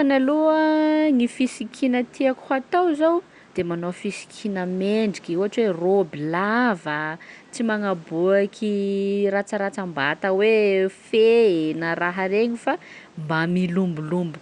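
No technical faults are audible in this speech recording.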